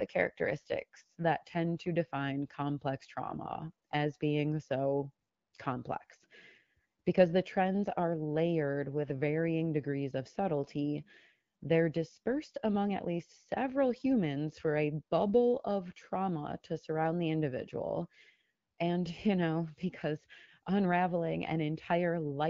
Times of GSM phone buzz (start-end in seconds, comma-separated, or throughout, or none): none